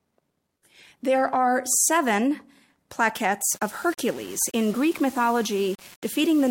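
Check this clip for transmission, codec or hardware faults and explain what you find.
One fault: from 3.41 s to the end at 6.50 s, the speech was likely requantised to 6 bits by plain rounding, so low bit depth without dither leaves grainy, signal-following distortion only about 25 dB below the voice.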